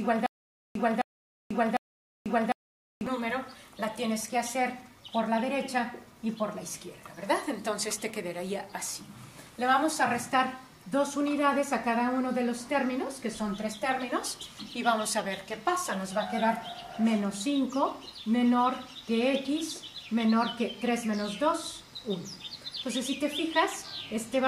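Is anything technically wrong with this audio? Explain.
Yes. A stutter with silent gaps runs from the very start of the clip, already under way at 0 s, until about 3.07 s. The likely cause is a player or stream stall: on each retry it replays the last fragment it holds, then runs dry. A burst about 262 ms long repeats three times, each followed by roughly 490 ms of dead digital silence, giving an even 753 ms cycle. Whatever audio belonged in that stretch is missing.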